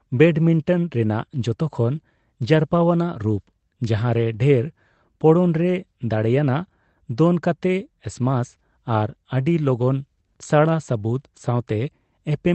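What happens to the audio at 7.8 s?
At 7.8 s the speech carries straight through with no dropout, glitch or other fault, just the band-limited sound of the Opus call path.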